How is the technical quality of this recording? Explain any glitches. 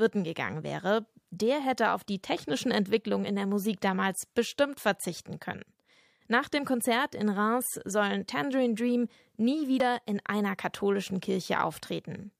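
There is one glitch. At 9.80 s, damaged data in a compressed stream corrupts a short stretch of frames, so the decoder misreads them and loses sync until it finds the next valid frame header. The result is a brief disruption, about 12 ms long, cutting across the speech.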